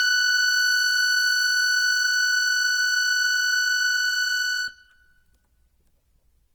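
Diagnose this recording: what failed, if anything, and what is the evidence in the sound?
Codec stage: plainly audible Opus compression throughout, with tones turned grainy and rough but few spectral holes, likely a low-bitrate, around 16 kbps, music-mode encode.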